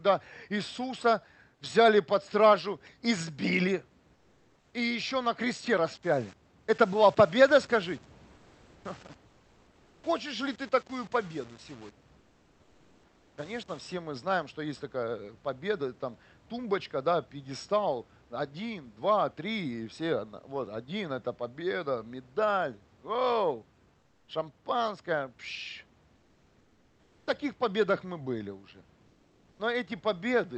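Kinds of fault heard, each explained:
Comfort noise in place of the background: the sender likely stopped transmitting during pauses under discontinuous transmission, so the receiver filled each gap with synthetic noise instead of the real room sound. The background turns flat and featureless, about 2 to 3 dB quieter, at 4.15–4.71, 8.35–8.83, 9.27–10.03, 12.19–13.35, 23.99–24.27 (between "это победа медаль оу" and "шампанское пш"), 26.15–27.27 and 29.07–29.59 s.
Low bit depth without dither: the signal was likely rounded to very few levels with no dither, consistent with roughly 7-bit resolution, so the error tracks the signal itself. From 5.93 to 13.93 s, after "и еще на кресте" and up to "мы знаем что есть", the speech takes on a gritty, grainy distortion sitting only around 25 dB below it, roughest on quieter passages, where it sputters and shifts with the sound.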